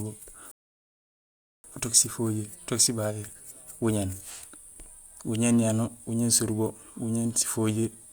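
At 0.51 s the speech halts in a rebuffering stall: the player has run out of downloaded audio and waits, silent, until 1.64 s. Unlike a dropout, no speech is skipped. It resumes exactly where it stopped, adding about 1.1 s.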